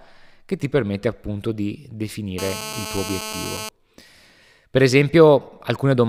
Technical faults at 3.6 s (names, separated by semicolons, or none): GSM phone buzz